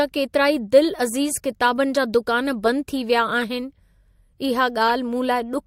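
At 3.42 s and again from 4.88 to 4.91 s, a corrupt frame decoded breaks through the speech. Flipped bits in the compressed data gave the decoder wrong gains or codes, and it played the damaged frame anyway. The first is short, from a single frame. The second spans about two frames, peaks near -15 dBFS, and is louder. Unlike a click or a concealed dropout, each error puts energy at the wrong frequencies across a whole frame.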